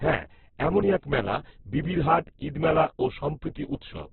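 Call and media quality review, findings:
Opus compression, whole clip: speech grainy and rough, nothing above 4.2 kHz. Likely a starved Opus encoder; the narrow band and coarse band-filling point to roughly 8 kbps.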